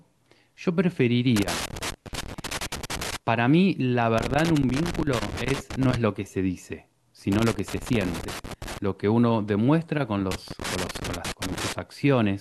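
Loose connector crackle breaks up the speech four times: 1.36 to 3.16 s, 4.18 to 5.96 s, 7.32 to 8.78 s, and 10.31 to 11.73 s. A worn contact chops the signal, giving irregular scratchy bursts.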